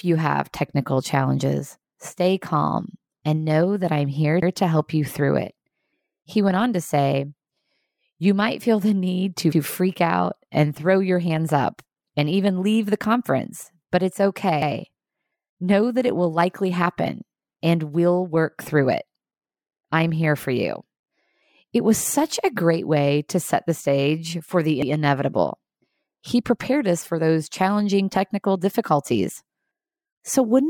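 At 4.42, 9.52, 14.62 and 24.82 s you get overlapping chunks: each 5 s block restarts 100 ms early, so that slice repeats as a quick stutter.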